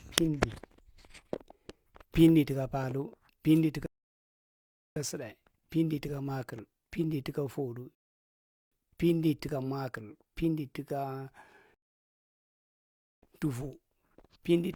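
A speech recording hit three rebuffering stalls: playback ran dry and paused for new data, cutting to silence from 3.86 to 4.96 s (just before "sutdae pindi tuka"), 7.95 to 8.72 s, and 11.74 to 13.23 s, then resuming exactly where it left off, adding about 1.1, 0.77 and 1.5 s. At 13.42 s a very slight jump points to a dropped buffer (overrun), likely from samples overwritten before being read, losing a very small sliver of audio.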